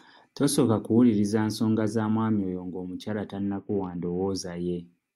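From 3.42 to 4.29 s, just after "za mwami oyo ng'omukyala", a Bluetooth SBC bit pool drop starves the encoder: the upper sub-bands lose their bits and the rest are quantised coarsely, which fits a fall from 31 to about 7, roughly 61 kbps. The treble turns dull and gritty noise rises.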